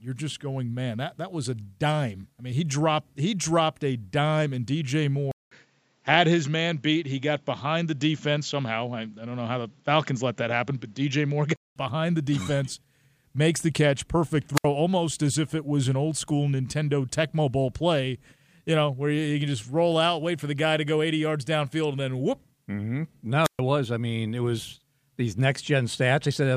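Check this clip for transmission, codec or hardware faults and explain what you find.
Two kinds of fault are present. From 5.31 s to 11.76 s the speech turns duller and boxier after a 200 ms gap, with nothing above 7.6 kHz, a faint new noise floor, and the level about unchanged. This is likely an input switched to a poorer device with a narrower band. On a spectrogram the upper band cuts off sharply at the gap and returns at 11.76 s.

Wireless microphone squelch dropouts occur at 14.55 s and 23.43 s. The FM radio signal fades far enough that the receiver's squelch mutes its output, opening holes of near silence lasting 67 ms and 127 ms. The waveform shows them as flat, near-empty gaps that cut abruptly into the speech.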